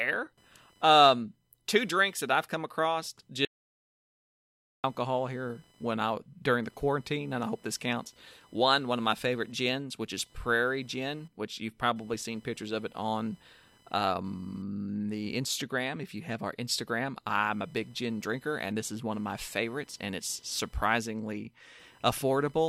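A speech recording carries computer activity noise throughout: a buzzing, chirping texture pulsing at around 1 kHz, roughly 35 dB below the speech. It rises and falls with the machine's processor, graphics or mouse load through a shared ground, not with the talker, which separates it from steady mains hum. From 3.45 s to 4.84 s, after "that I've come across" and before "here when I during", an audio dropout to silence removes about 1.39 s mid-flow. The gap holds no room tone at all, unlike a noise gate closing, and the likely cause is the input being lost through a disconnected device, a failed link or a stray mute while recording continued.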